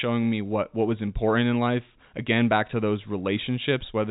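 Nothing stood out on listening to this speech recording, which has the narrow band of G.711 telephone coding, with nothing above 3.8 kHz.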